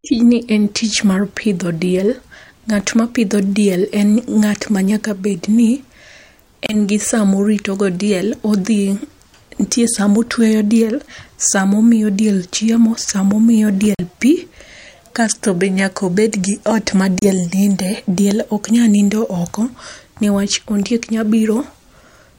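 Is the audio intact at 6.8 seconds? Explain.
Yes, at 6.8 s the sound is back. Just before, from 6.66 to 6.75 s, a Bluetooth dropout, likely from late packets, left a silence. The audio then resumes further along rather than where it stopped, which sets it apart from a stall that pauses and continues.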